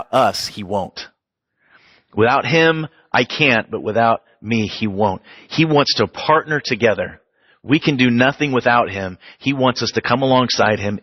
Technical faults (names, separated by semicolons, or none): adaptive stream at a lower bitrate